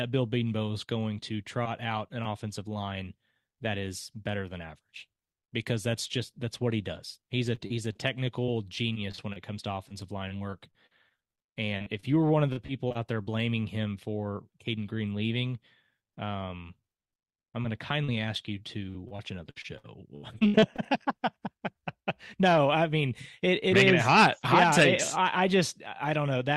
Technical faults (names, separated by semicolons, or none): short concealed packet loss; repeated packet loss (robotic sound)